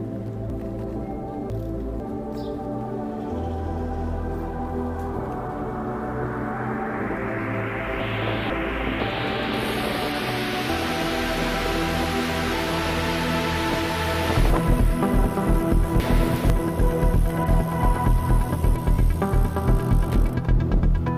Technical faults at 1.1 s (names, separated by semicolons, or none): chunks out of order